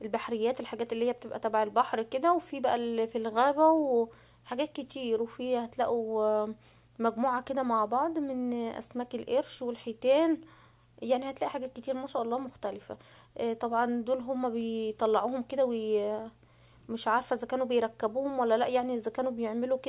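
No technical faults can be heard anywhere in the recording.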